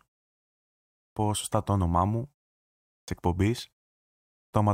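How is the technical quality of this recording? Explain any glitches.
The recording has one recurring fault: clipped start after a pause. It happens three times. At 0.64 to 1.16 s, just before "σωστά το όνομά μου", about 0.52 s is lost. At 2.62 to 3.08 s, right after "σωστά το όνομά μου", about 0.46 s goes. At 4.08 to 4.53 s, about 0.45 s is missing. The output device sleeps during silence and is slow to wake. Speech then bursts in abruptly, missing its opening sounds. The silence in the pauses themselves is the expected muting.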